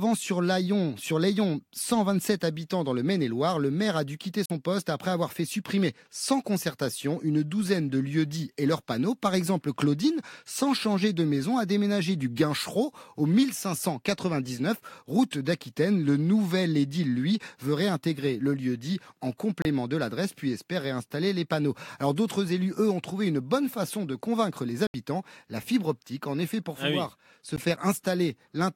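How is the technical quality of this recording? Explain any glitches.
The speech has four brief gaps, most likely Bluetooth dropouts, at 4.46 to 4.50 s, 19.62 to 19.65 s, 24.87 to 24.94 s and 27.56 s. Audio packets missed the headphones and the output went silent. Holes of roughly 44, 29, 73 and 15 ms fit one to five lost packets, and the speech resumes further on as if it had kept playing.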